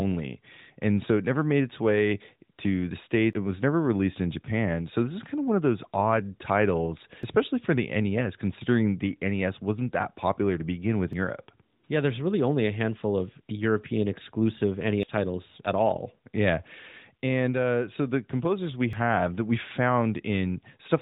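At 3.33, 7.23, 11.13, 15.03 and 18.93 s the speech skips abruptly. Each skip drops about a tenth of a second, and the two sides butt together without silence. This is likely audio missing between chunks, lost as a recorder with roughly 4-second chunks rolled from one chunk to the next. Through all of it, the narrowband mobile codec leaves nothing above 3.8 kHz.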